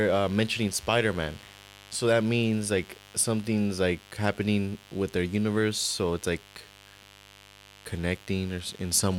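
From the first second to the last, switching spikes from a 50 Hz mains supply are leaking into the signal path, the kind of interference a dimmer, a rectifier or a broken shield lets through twice per cycle. Those sharp spikes carry a ladder of 50 Hz harmonics up into the kilohertz range, so the speech sits on a constant, raspy mains buzz rather than a smooth hum, running roughly 25 dB below the voice.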